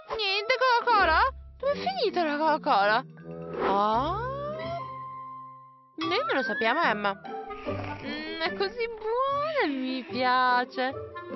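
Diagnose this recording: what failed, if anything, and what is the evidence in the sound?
Nothing in the recording points to a failure at any stage of the chain. A full listen turns up no event that would call for a diagnosis.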